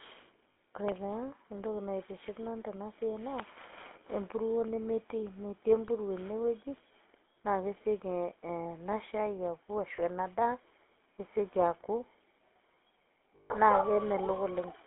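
From start to finish the speech has a buzzy, gravelly roughness, with nothing above about 3.5 kHz and little below 250 Hz. That is the GSM full-rate codec, which fits a 13 kbit/s coder: a vocal-tract model driven by sparse, regularly spaced pulses that roughen the voice. Lost GSM frames cut in at 0.52 to 0.56 s, 9.96 to 10.0 s and 13.36 to 13.52 s, each heard as a brief rough, metallic ring. The decoder repeats the last good frame, so the longest gap, 140 ms, holds the longest.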